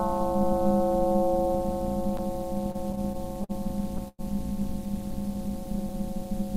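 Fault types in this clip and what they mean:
Overlap-add ripple: Frames were rejoined with an overlap that does not sum to an even gain. The level dips and swells once per frame, around 200 Hz, by about 60 dB. The whole clip carries a harsh, metallic buzz.
Repeated stalls (stutter): Between 2.71 and 3.51 s the stream kept running dry. There are seven short hitches, the longest 50 ms, and 139 ms were filled in with continued sound. Nothing drops out, but the sound drags and stutters there.
Call audio freeze: From 4.08 to 4.21 s the sound stops advancing. A held continuation fades, leaving about 30 ms of silence, then it resumes where it left off. The 104 ms gap was likely caused by packets held up in transit, emptying the jitter buffer.
Jitter buffer slow-down: From 5.11 to 6.30 s the receiver repeated tiny slices of sound to rebuild its reserve. It added 66 ms, so playback runs at about 95% speed. 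Pitch holds steady, but the sounds drag and stretch slightly.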